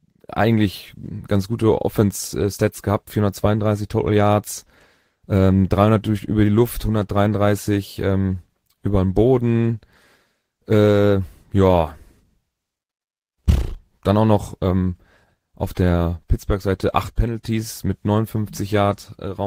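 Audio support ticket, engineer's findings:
Speech recording reviewed; no audible faults found.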